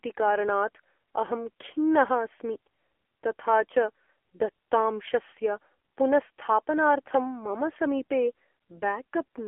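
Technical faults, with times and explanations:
Throughout, AMR narrowband mobile codec: the speech is confined to a telephone band of roughly 300 Hz to 3.4 kHz, with nothing at all above 3.5 kHz, so it sounds thin and muffled. The codec rebuilds each 20 ms frame from a vocal-tract model excited by only a few pulses. Here the damage is heavy and the speech sounds distinctly buzzy and synthetic, which fits one of the low AMR-NB modes, around 6.7 kbps.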